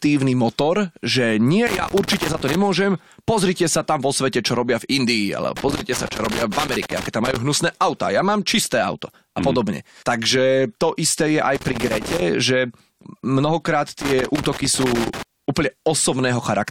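At 1.67 to 2.55 s the speech breaks into loose connector crackle, a ragged burst of scratching. It returns from 5.57 to 7.37 s, just before "hnusné auta ja mám", then from 11.55 to 12.22 s between "to isté je aj" and "že mnohokrát", and last from 14.01 to 15.23 s after "že mnohokrát". A worn or dirty contact is making and breaking as it shifts, chopping the signal.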